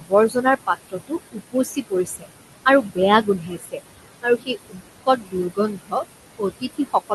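Speech over room noise sitting about 11 dB below the voice, with noise suppressor artifacts throughout. The suppressor pulls the steady background down by about 19 dB between phrases and lets it rise under the voice. On a spectrogram this shows as a patchy, blinking noise floor that darkens in the gaps and brightens beneath speech energy. Speech cut by the noise suppressor occurs from 0.00 to 2.26 s, 2.66 to 3.8 s, 4.22 to 6.04 s and 6.39 s to the end. Soft consonants and word endings are treated as noise and lowered with it, by up to about 18 to 21 dB. Together they lose roughly a second, half a second and under a second of material in the first three spans. In the waveform, tails and onsets are turned down, and high-frequency consonant streaks are fainter on the spectrogram, below the 12 kHz ceiling of the call path.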